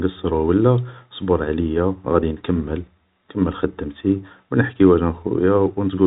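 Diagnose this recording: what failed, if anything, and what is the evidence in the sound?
Nothing failed here; the telephone-band speech shows no faults.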